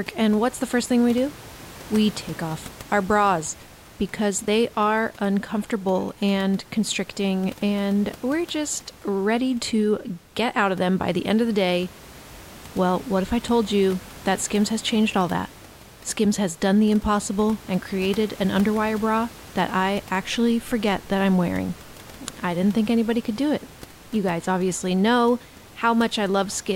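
Nothing goes wrong technically anywhere in this speech recording, and the only thing in the background is a bit of room noise sitting about 21 dB under the talking, which is just part of the space the microphone was in.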